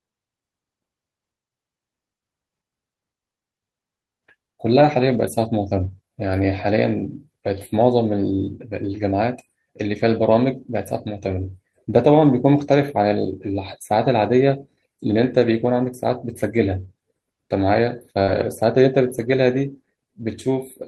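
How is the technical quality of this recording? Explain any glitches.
The speech has two kinds of network damage, both brief and scattered through the clip.

Lost packet rebuilt from error correction occurs at 5.01–5.19, 6.25–6.27, 10.23–10.25, 11.23–11.33, 15.39–15.41, 18.27–18.41 and 19.09–19.23 s. The stretches last 20 to 100 ms, which fits one to five lost 20 ms packets. The decoder played low-bitrate copies carried in the following packets, so nothing drops out. The affected syllables just turn rougher and grainier. On a spectrogram these appear as short, smeared, noisier patches with no gap.

Short concealed packet loss occurs at 18.23–18.29 s, just before the 18.27 rebuilt stretch. About 40 ms never arrived, and the decoder extended the preceding sound to fill it, then crossfaded back. It is heard as a quick smear or wobble. The waveform shows a filled-in segment rather than silence.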